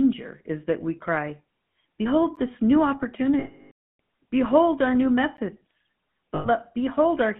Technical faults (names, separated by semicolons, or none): GSM full-rate codec; gap between chunks; lost GSM frames